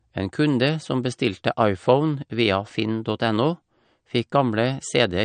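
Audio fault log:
throughout, likely MP3 compression: plainly audible codec damage, treble gone above 9.1 kHz, a watery swirl, fits a bitrate near 52 kbps starving weak frequency lines.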